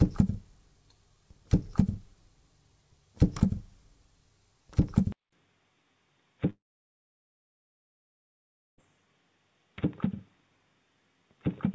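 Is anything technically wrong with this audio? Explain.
Yes, there are two faults.

At 5.12 s, after a 200 ms gap, the sound turns dull and boxy and stays that way to the end. Nothing above 3.8 kHz remains, the level falls about 5 dB, and a faint new noise floor appears. This is likely an input switched to a poorer device. The call path's G.722 band stops at 8 kHz, so a sudden lasting drop to 3.8 kHz with a changed tone points to the input, not the codec.

From 6.50 s to 8.81 s, a long network dropout removes about 2.3 s of audio. The receiver briefly stretches the last sound into a fading buzz, then leaves about 2.2 s of silence, most likely from lost packets. Unlike the 200 ms gap at the switch, this silence is long, and the audio after it keeps the same dull band as before, so nothing about the sound's character changes.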